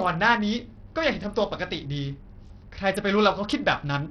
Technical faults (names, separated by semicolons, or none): Bluetooth SBC compression